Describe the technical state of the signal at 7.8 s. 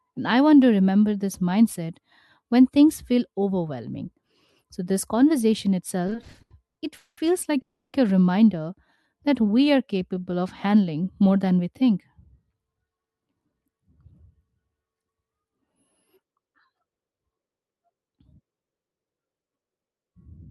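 At 7.8 s there's a call audio freeze from 7.61 to 7.95 s: the last sound is stretched into a fading buzz that goes silent, likely from held-up packets, then the speech resumes intact about 320 ms late.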